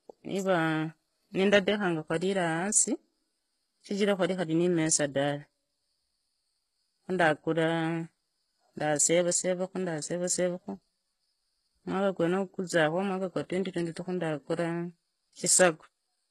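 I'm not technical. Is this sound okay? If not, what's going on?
No. Throughout the recording, the speech has a gritty, metallic edge, and the s sounds come out lispy or smeared. This is most likely HE-AAC compression. It saves space by storing only the lower part of the sound and then faking the treble by copying lower tones upward, with no sound above about 12.4 kHz. A plainly muffled recording would lose its brightness. Here the brightness is still present, but it is artificial.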